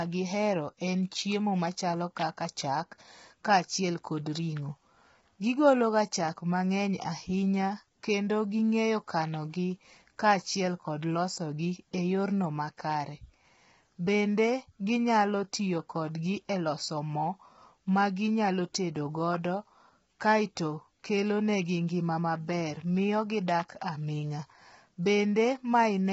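Low-delay AAC compression throughout: rough, grainy speech with noise between harmonics and nothing above 7.8 kHz, likely AAC-ELD's short frames starved at roughly 16 kbps.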